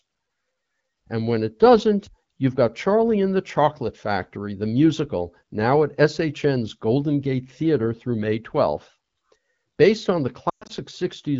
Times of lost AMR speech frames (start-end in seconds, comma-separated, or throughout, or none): 10.50-10.72